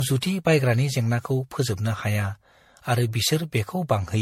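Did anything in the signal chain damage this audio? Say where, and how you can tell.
Yes, at the codec stage, and it runs through the whole speech clip: generation loss, the swirly, hollow smear with blurred consonant attacks and nothing above 16.5 kHz. It sounds like roughly seven MP3 passes, each requantising on a shifted frame grid, likely at around 60-odd kbit/s.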